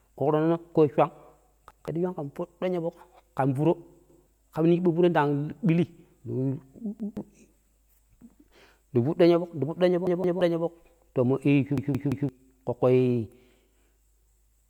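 At 1.71, 4.10, 7.00, 10.07 and 11.78 s the speech stutters with a repeated buffer: fresh audio arrived late, so the device replayed the same 170 ms chunk, which fits an 8192-sample buffer, with a hard join each time. The first three repeat once. At 10.07 s it repeats twice and at 11.78 s three times, losing about half a second of speech. Unlike a dropout, there's no silence, only the identical fragment looping.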